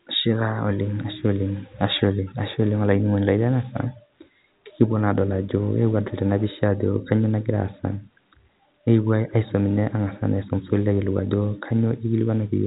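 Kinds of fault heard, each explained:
No faults are heard.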